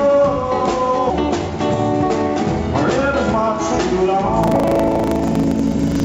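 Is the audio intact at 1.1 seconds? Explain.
No. A skip ahead occurs at 1.10 to 1.12 s. About a second of audio was dropped, either in transit or by an overflowing jitter buffer. Playback jumps straight forward with no gap filled. The two sides are joined almost directly, so the sound lurches abruptly.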